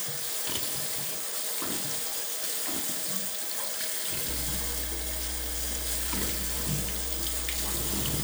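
From about 4.29 s to the end, a mains hum comes in, a steady low drone at 60 Hz sitting only a little under the sound itself, roughly 5 dB down, so it's hard to miss. That's the power line leaking into the signal path, most plausibly through a ground loop or a transformer sitting close to the cabling. You hear it as a constant buzzy floor with a few low harmonics stacked on top, running unchanged right through to the last moment.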